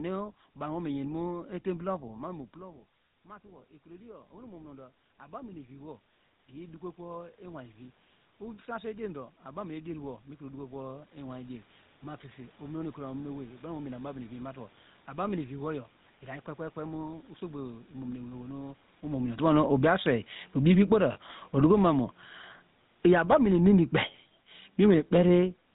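From start to finish the speech carries the GSM full-rate codec's signature: a buzzy, gravelly roughness that is plainly audible, consistent with the 13 kbps full-rate coder. The codec models the vocal tract and excites it with a sparse, regularly spaced pulse train, so fine detail in the voice is replaced by a coarse, grainy texture. On a spectrogram, energy stops abruptly at 4 kHz, leaving the band above it empty, and voiced stretches show smeared, slightly blurred harmonics instead of clean striations.

At about 2 s the talker moves and the level at the microphone drops by about 20 dB, a normal change that simply happens in the room. The automatic gain rising begins at 1.92 s and continues until 12.88 s. The gain control hears the quieter input and raises its gain by about 18 dB, slowly enough that voice and room noise swell back together over several seconds. On the waveform the envelope sinks at first, then climbs steadily, and the noise floor between phrases lifts with it.

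Around 19 s the talker moves again and the input becomes louder. From 19.3 s to 23.41 s the automatic gain falling pulls the gain down by about 14 dB. The sound starts out loud and forward, then sinks gradually, and the background noise sinks with it. The waveform shows a tall envelope at 19.3 s that tapers toward 23.4 s, while the spectrogram's colours, noise floor included, fade evenly across the band.

During that fall, at 21.12 to 21.18 s, there are lost GSM frames: a 40 ms gap, which fits two 20 ms frames. The decoder fills the gap by repeating the last good frame's settings at a falling level, so the sound briefly hangs as a rough, metallic ring. On a spectrogram this appears as a short block of frozen, horizontal harmonic bands that weaken slightly. In the waveform it is a small stretch of repetitive, decaying cycles.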